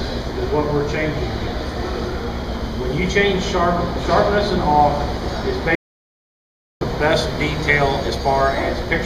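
An audio dropout to silence runs from 5.75 to 6.81 s: about 1.06 s of silence, likely from the input link or device briefly failing.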